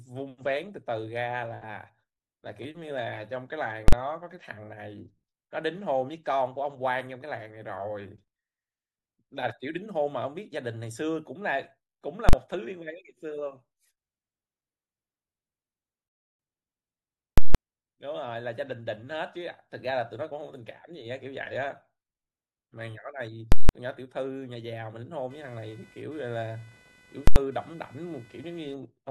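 A speech recording with five bursts of invalid numbers at full scale: the output pins to one extreme value for short blocks at 3.88–3.93 s and 12.29–12.33 s, each 42.67 ms, which fits a 2048-sample block and lands as one bang. Longer blocks at 17.38–17.55 s and 23.52–23.69 s, 170.67 ms each and fitting 8192 samples, give a loud pop at each edge with dead silence between. Another at 27.27–27.36 s lasts 85.33 ms. Unlike clipping, nothing of the speech survives inside these blocks. From 25.30 to 28.74 s, computer activity noise adds interference pulsing at around 500 Hz, roughly 25 dB below the speech, coming and going independently of the talking.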